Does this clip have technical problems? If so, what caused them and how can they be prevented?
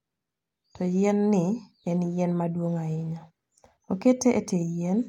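No, no technical faults here.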